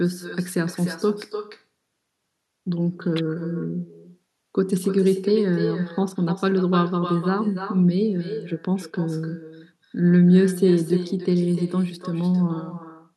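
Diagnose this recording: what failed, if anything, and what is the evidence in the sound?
Echo with no canceller, at the call-processing stage: throughout, the speech returns roughly a third of a second later, about 13 dB quieter, showing as faint delayed repeats of each burst on the waveform.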